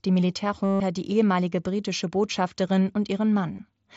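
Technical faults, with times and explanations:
0.65 to 0.80 s and 3.57 s, concealed Bluetooth headset packet loss. Packets vanished, and the phone filled each gap by repeating a closely matching recent stretch. The 150 ms run before "die ehemalige britische" buzzes at full level, then warbles. The 15 ms loss barely shows.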